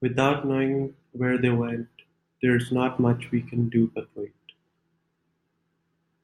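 Listening through the speech, nothing stood out as a technical problem at any point.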